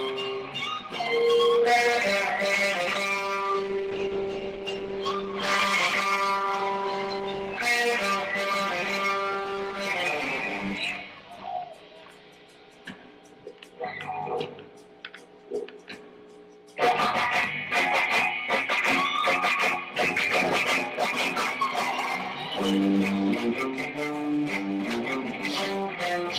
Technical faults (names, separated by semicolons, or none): call bitrate drop